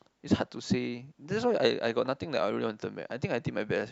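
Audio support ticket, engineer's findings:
Listened to the speech clip and found nothing to flag on this one, so no findings to log.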